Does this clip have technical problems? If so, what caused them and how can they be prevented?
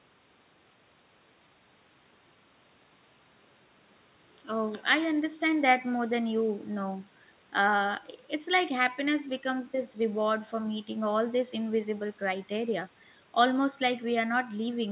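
No, there's nothing wrong to track down here, since this speech just comes through an ordinary call path whose audio stops at about 4 kHz, which fits a narrowband telephone-style codec, so there's nothing to prevent.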